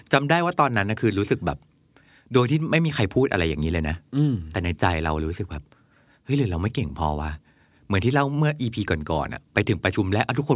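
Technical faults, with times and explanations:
Nothing technical jumps out here; the speech comes through without any audible faults along the way.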